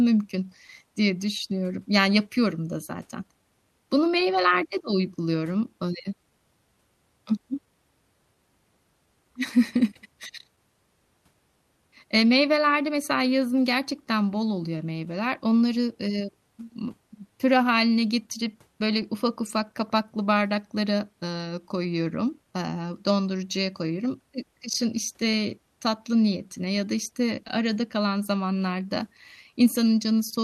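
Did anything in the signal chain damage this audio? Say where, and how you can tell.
Yes. Clock drift between sender and receiver at the network jitter buffer: the sender's clock runs roughly 1.5% slow, so timing wobbles through the whole clip.

Repeated timing corrections from 2.02 to 29.52 s: the receiver keeps repeating small slices, playing at 99% speed and stretching things by around 300 ms.

Scattered short gaps, also network-side: a few tiny ticks between 0.67 and 4.94 s (none longer than about 7 ms), then roughly ten between 19.02 and 30.34 s, the longest around 30 ms, each patched by extending the last sound.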